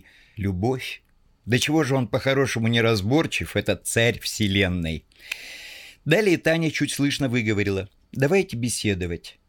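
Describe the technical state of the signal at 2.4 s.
At 2.4 s the speech signal is intact, with no dropout, distortion, clicks or other technical fault audible.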